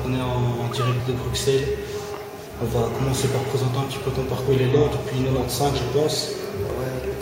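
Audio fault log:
4.47 s and 6.70 s, damaged data in a compressed stream: two very short digital blips, each about 10 to 15 ms, break into the sound. Corrupted bytes in the compressed stream made the decoder misread those frames and lose sync until it found the next valid frame header.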